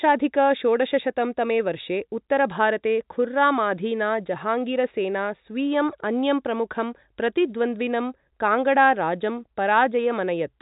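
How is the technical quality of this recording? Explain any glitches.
No glitches can be heard, and the recording carries the narrow band typical of G.711 mu-law telephone coding at 64 kbps, with nothing above 3.8 kHz, while the signal stays steady and unbroken throughout.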